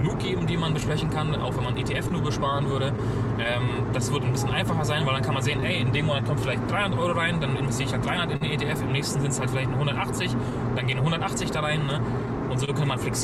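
Clock drift between sender and receiver runs through the whole clip. The sending side's clock is about 2% slow, so the receiver's jitter buffer keeps draining and has to be topped up. Unlike network loss, which strikes at random, this is a steady mismatch in one direction, and it shows up as small, unevenly spaced timing hiccups from start to finish rather than as isolated dropouts.

Scattered short gaps appear first between 0.01 and 4.31 s: about seven tiny holes, none longer than roughly 15 ms. Each was patched by continuing the preceding sound, so they come across as brief ticks or smears. A second cluster of about three falls between 7.38 and 8.43 s, and the longest is about 40 ms. A third group of about five lies between 10.5 and 12.7 s, the longest around 30 ms. These are one-off patches, with no steady pull on the tempo.

Repeated timing corrections run from 0.05 to 11.03 s. To keep pace with the slow sender, the receiver repeatedly stretches the audio by re-playing short pieces. 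Playback runs at about 99% speed, and roughly 100 ms is added over that stretch. The edits all go the same way, but their spacing is irregular. Unlike the concealed gaps, which are brief blemishes, they come across, if at all, as slight hiccups or an unsteady tempo.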